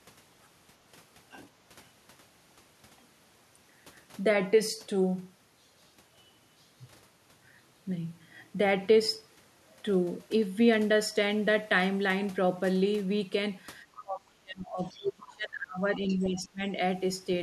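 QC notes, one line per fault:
13.96–14.02 s, 14.94–15.06 s and 16.08–16.27 s, other side's voice leaking through: three brief scraps of a second, fainter voice sit roughly 20 to 25 dB under the talker. This is likely far-end audio from a loudspeaker that the echo canceller left in the microphone signal. On a spectrogram they appear as faint, short harmonic smears with their own pitch track, separate from the main voice.
14.01–16.62 s, speech suppressed in double talk: the talker's level sags, by as much as around 25 dB at the deepest, for about two seconds in all across this span. The likely cause is an echo canceller that could not tell the two voices apart and attenuated both. The waveform envelope shows the level dropping.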